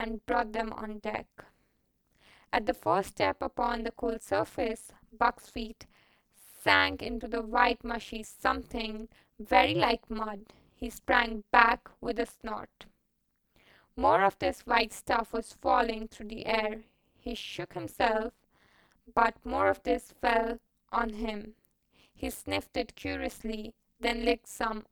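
Throughout the speech, frames were windowed and overlap-added with an overlap that fails to sum to constant gain, producing overlap-add ripple. The level swings by about 60 dB once per frame, around 200 times a second, giving a harsh, metallic buzz with extra tones around each note.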